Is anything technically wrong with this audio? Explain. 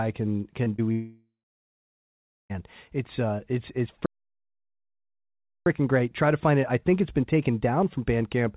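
Yes, this speech has several technical faults.

At 0.64 to 0.68 s and again at 0.76 to 0.80 s there are brief smears in the sound. These are short concealed packet losses: about 20 ms of audio arrived too late each time, and the receiver bridged each gap by extending the preceding sound before rejoining the real signal.

From 0.92 to 2.52 s the sound turns into a fading continuation of itself and then goes quiet for roughly a second before returning with material missing. This is likely a long network dropout. The receiver kept extending the last sound while no data arrived, then gave up, so the lost stretch is never heard.

From 4.06 to 5.66 s the audio stops dead mid-flow for about 1.6 s, then resumes. That pattern likely points to a playback stall, where the player ran out of data or was blocked and produced silence until it could continue.

The band-limited tone, with nothing above 4 kHz, fits the G.711 A-law call codec the audio passed through.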